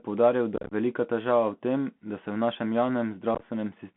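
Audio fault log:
Throughout: Bluetooth CVSD headset codec. The sound sits in a narrow band from about 150 Hz to 3.4 kHz. Nothing higher survives, so it is dull and boxy. The codec damage is plainly audible. Each sample is one up-or-down bit at a 64 kbps rate, and the adaptive step cannot keep up with fast, loud changes. Sibilants turn scratchy and loud peaks distort. A fine granular hiss runs underneath.
0.56–0.73 s and 3.35–3.43 s: unconcealed Bluetooth headset packet loss. Short holes cut into the sound with hard edges. The first burst loses about 109 ms scattered across 150 ms, with the longest gap about 34 ms. It ends just before "velika težava v tem" and fits roughly thirty lost packets. The second loses 45 ms across 68 ms, with the longest gap about 19 ms, just after "da se v našem". It fits roughly ten lost packets. Nothing fills the gaps, so the sound turns chopped and crackly and comes back briefly quieter as CVSD recovers.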